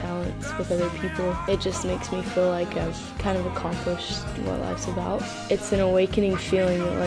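No technical faults are audible.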